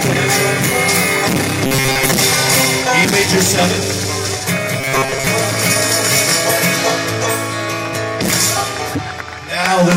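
Two short stretches of the sound turn into a rigid, metallic buzz, from 1.67 to 2.11 s and from 4.80 to 5.27 s. This is robotic sound from repeated short buffers. Both passages carry a fixed pitch of 134 Hz, which fits a buffer of about 7.5 ms. The likely cause is audio arriving too seldom, so playback loops that last fragment. The repeats fill most of each stretch while the real audio is skipped.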